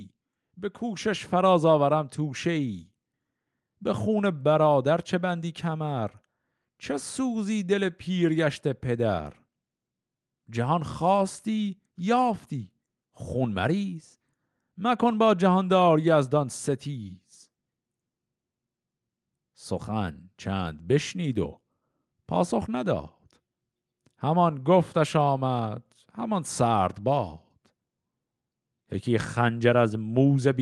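From 0.56 s to 7.97 s, automatic gain rising: the gain control treats the input as too quiet and gradually raises its gain by about 4 dB, so the whole signal swells steadily across those seven seconds, over speech whose top end stops near 12 kHz through the call codec.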